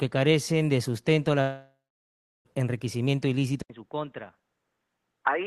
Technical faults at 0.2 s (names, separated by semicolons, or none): none